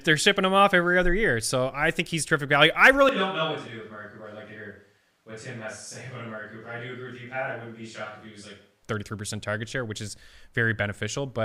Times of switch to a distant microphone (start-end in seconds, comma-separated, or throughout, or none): 3.09-8.83